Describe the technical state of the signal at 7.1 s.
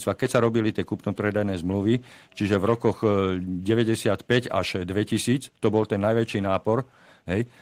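At 7.1 s the speech signal is intact, with no dropout, distortion, glitch or other audible fault at that moment.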